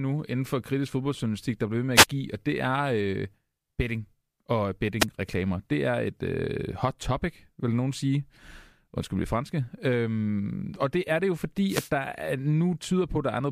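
Wireless microphone noise hits occur where the FM radio link fades as reflected signals cancel, letting receiver noise surge over the speech as brief static swishes: 1.95–2.06 s after "der bliver ved med", 4.99–5.06 s after "betting og", and 11.67–11.90 s after "det er det jo".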